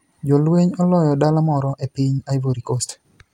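Speech with a time-stretched section from 1.28 s to the end, sped up about 1.45 times so it sounds rushed while pitch stays unchanged. This is likely from pitch-preserving software squeezing the audio to fit a length. On a spectrogram, harmonics keep their spacing as syllables crowd together, with small breaks where pieces were dropped.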